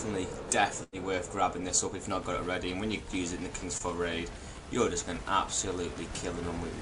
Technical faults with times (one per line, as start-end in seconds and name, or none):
0.83-0.95 burst of packet loss
3.77-3.82 short concealed packet loss